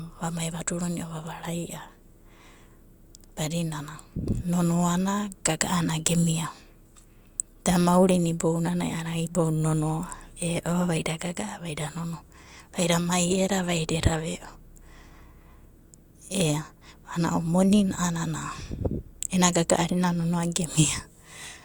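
No technical faults can be heard anywhere in this speech recording. There is nothing in the audio that calls for a timestamp or a note on the signal path.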